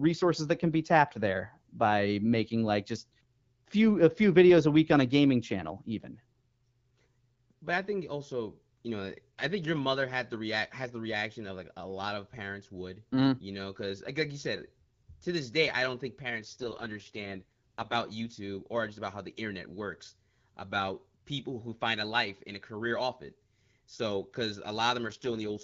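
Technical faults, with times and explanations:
16.38 to 17.96 s and 25.05 s to the end, AMR rate drop: Just after "day i don't think", the speech turns rough, raspy and synthetic until "youtube or just about". After "off it so because" it happens again and lasts to the end. The bandwidth stays the same and nothing drops out. Only the coding gets coarser. The sound fits the network pushing the HD Voice link from 12.65 down to 6.6 kbit/s to protect a weak radio signal.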